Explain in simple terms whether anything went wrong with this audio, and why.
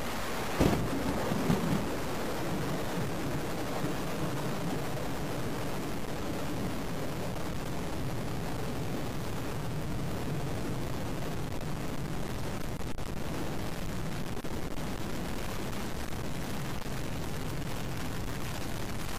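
Yes, two things went wrong. The whole recording has a grainy or buzzy edge, and the quiet gaps between sounds fill with a gritty hiss. That's most likely a stuck bit: one bit in the digital data stays fixed at 0 or 1, so roughly half the sample values land in the wrong place, following the shape of the waveform. It's in the recording all the way through.

Then there are compressed frames skipped. At 7.20, 10.68, 13.56, 16.07 and 19.00 s, the audio suddenly jumps ahead. Each time, whole chunks of the compressed file were dropped, either because they were missing or because the decoder rejected them as damaged. Each chunk is 46.4 ms. The jump at 7.20 s loses about 400 ms, the one at 10.68 s loses about 100 ms, and the rest lose about 300 ms each.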